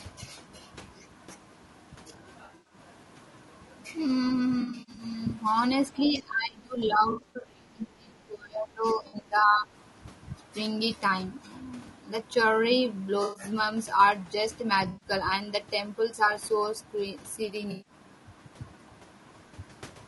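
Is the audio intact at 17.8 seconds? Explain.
No. From 17.71 to 17.93 s there is AAC frame loss with concealment: the decoder patches missing frames from the last good spectrum, giving a smeared, noisy, phasey stretch. Throughout, the speech sounds rough and grainy, with plainly audible damage, likely from low-delay AAC compression near 32 kbps.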